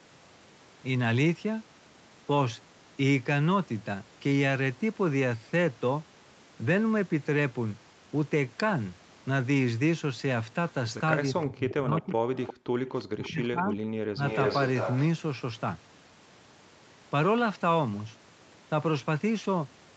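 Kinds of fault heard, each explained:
Speech suppressed in double talk: Twice the voice gets pushed down hard, from 11.29 to 12.41 s and again from 13.07 to 14.23 s, dropping by something like 40 dB at worst, for roughly a second and then most of a second in total. It sounds like the likely culprit is an echo canceller that couldn't tell the near talker from loudspeaker echo while both sides were going, so it clamped everything.
Echo leak: A delayed copy of the voice sneaks back in three times: 11.7 to 12.54 s, 12.87 to 13.47 s, and 14.29 to 15.02 s. It trails the original by 350 ms. The first two are fairly faint, well under the main voice, but the last one is nearly as loud as the speech itself. That's likely a speakerphone whose echo canceller didn't fully scrub what its microphone heard and sent it back down the line.
Background gated by the echo canceller: Between 12.69 and 12.79 s the room sound just falls away for about a tenth of a second, down by about 40 dB, then comes straight back. 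That's the canceller slamming the microphone down while the loudspeaker was active and releasing once it let go. It's brief, and it lands right between the echo bursts.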